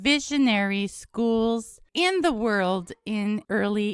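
Nothing goes wrong anywhere in this bit of speech, so there's no fault to point to and nothing to time.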